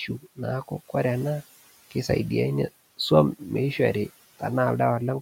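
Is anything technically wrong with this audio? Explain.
Yes. Between 0.07 and 0.39 s, the speech is cut by the noise suppressor: it misjudged part of the speech as background and attenuated it along with the room noise, which sits about 22 dB below the speech. In total, around a tenth of a second of sound within that span is affected, pulled down by as much as about 13 dB at the deepest point. Those moments sound swallowed and faint.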